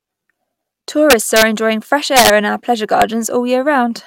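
Integer overflow cracks this speech clip at 1.10 to 1.43 s before "enjoying fresh", 2.17 to 2.30 s before "in our pleasure", and 3.02 s just after it. Peaks driven about 2, 5 and 2 dB past full scale wrap to the opposite sign, giving sharp violent cracks.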